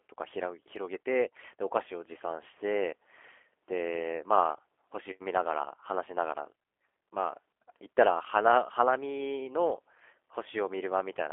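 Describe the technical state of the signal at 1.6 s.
At 1.6 s, as throughout the clip, the speech passes through a G.729 codec. It is rebuilt every 10 ms from a vocal tract model, a pitch predictor and sparse pulses, which fits an 8 kbit/s G.729A coder. Held to 300 Hz–3.4 kHz, it sounds narrow, plainly rough and synthetic.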